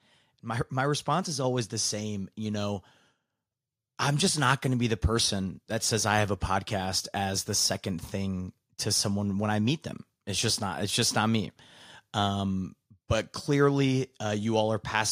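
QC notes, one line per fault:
1.44 s, microphone volume stepped up: between "my response is" and "the same" the input level jumps by about 4 dB in a single step, voice and background noise together, because the call software raised the device's input gain mid-phrase.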